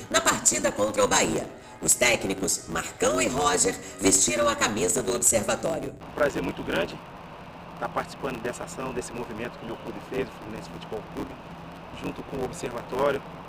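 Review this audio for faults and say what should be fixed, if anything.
There's a block size mismatch (truncated) running the whole way through: a steady 100 Hz buzz, and the audio plays about 1.16 times fast at roughly normal pitch. That fits one stage writing 512-sample blocks while the next reads shorter ones and drops each tail. Make sure both stages agree on block size, or buffer the leftover samples instead of discarding them.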